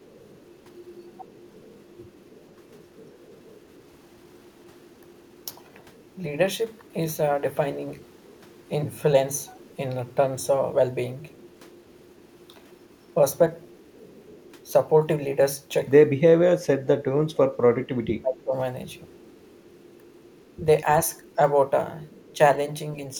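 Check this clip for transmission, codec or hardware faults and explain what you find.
Two faults turn up, both pointing at the far end's echo canceller: an echo leak across most of the speech, and a stretch of speech suppressed in double talk.

The echo leak runs from 0.0 to 6.87 s, 8.01 to 9.75 s, 11.32 to 14.72 s, and 18.9 to 22.37 s. Underneath the voice there's a faint delayed copy of the same speech, trailing by 229 ms every time. It's very quiet, roughly 35 to 40 dB down. The likely cause is a speakerphone on the other side whose canceller isn't fully removing what its mic picks up from the loudspeaker. The leftover gets sent straight back down the line. The steady 229 ms lag is the round trip through that path.

The double-talk suppression sits between 16.31 and 18.53 s. The voice dips while the other side is talking over it. Across that window about 1.5 s of speech is affected, and the deepest drops are roughly 25 dB. 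This is likely the canceller hearing both talkers at once, failing to tell the local voice from the loudspeaker echo, and turning everything down together.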